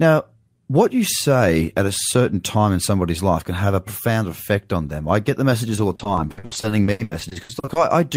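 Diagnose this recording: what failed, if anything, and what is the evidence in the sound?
From 5.75 s to 7.77 s, right after "them I get the", the speech turns choppy and robotic, with chunks of it simply absent. This is repeated packet loss on the network path. About twenty holes open across those two seconds, the longest around 80 ms, and the receiver covers each by stretching the last sound it had. The patching totals roughly 740 ms, over a third of the stretch, which produces the mechanical texture.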